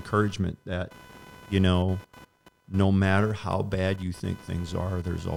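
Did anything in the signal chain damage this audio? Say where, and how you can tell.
Yes, in the analogue wiring. Computer activity noise, a buzzing chirp pulsing around 500 Hz, runs throughout, roughly 25 dB below the speech. Load changes of the processor, graphics card or mouse disturb the shared ground.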